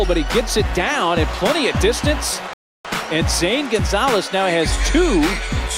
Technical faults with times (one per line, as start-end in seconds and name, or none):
2.53-2.85 rebuffering stall